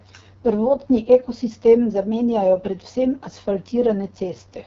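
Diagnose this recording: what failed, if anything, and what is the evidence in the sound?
The failure is at the codec stage: the whole speech clip passed through the AMR wideband (HD Voice) codec at a low rate. Throughout, the voice sounds rough and raspy, which points to the lowest 6.6 kbit/s mode. A spectrogram shows a smeared, noise-filled band near the top and nothing above 7.5 kHz.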